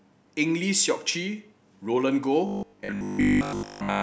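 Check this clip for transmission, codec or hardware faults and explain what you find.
One fault is present. From 2.47 s to 4.03 s: robotic sound from repeated short buffers. The speech turns into a metallic 50 Hz buzz, likely because a 20 ms chunk is replayed most of the time while the real audio is skipped.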